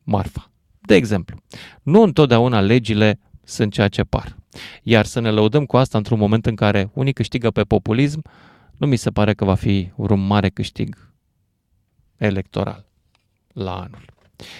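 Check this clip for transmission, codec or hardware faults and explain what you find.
Hard clipping occurs twice in this speech, from 1.95 to 2.32 s and again from 4.93 to 4.97 s. Both passages crackle on their loudest moments, with a rough edge riding the peaks. The cause is a stage driven about 2 dB beyond what it can pass, so the tops of the waveform are sliced flat. Those flattened crests generate harmonics high in the spectrum, and that is the crackle.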